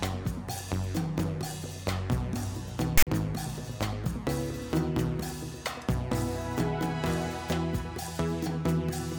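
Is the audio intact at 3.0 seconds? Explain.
No. File tags played as audio run from 2.98 to 3.07 s: a block of text tags followed by zero padding is decoded as if it were samples, giving a loud, one-sided rasp that drops into dead silence, with abrupt edges on either side.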